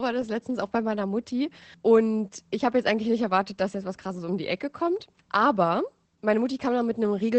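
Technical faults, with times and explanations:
Throughout: Opus voice compression, plainly audible, at roughly 12 kbps in the SILK linear-prediction mode, which fits wideband operation with 20 ms frames. Nothing remains above about 8.6 kHz, so the speech sounds muffled, and coarse excitation coding gives it a hoarse, slightly robotic edge.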